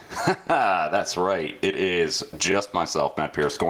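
Speech recording with two faults. Gain pumping runs through the whole clip, with a swing of around 20 dB, squeezing the dynamics flat. This is likely from gain set far too high ahead of a fast limiter or compressor. Overlapping chunks cause brief stutters at 0.47–0.49 s, 1.49–1.52 s and 3.54–3.56 s, where about 23 ms of audio plays twice at a join. The spacing fits one-second processing blocks whose starts overlap the previous block's end.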